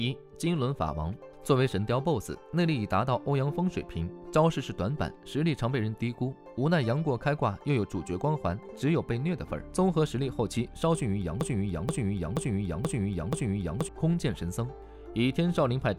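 From 11.41 to 13.89 s a broken-record loop sets in: a 0.48 s fragment repeats exactly five times, back to back, likely because the player or stream stalled on its last buffer. The sound meant for that stretch is lost. On a waveform or spectrogram, identical blocks tile side by side.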